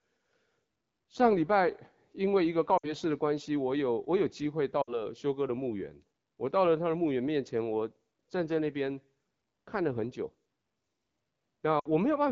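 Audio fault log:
2.78–2.94 s, 4.81–5.02 s, 11.80–11.88 s: lost AMR speech frames. Each is about 60 ms missing, which fits three dropped frames. The AMR-WB decoder stretches the last good sound, fades it fast, then the speech returns briefly rough.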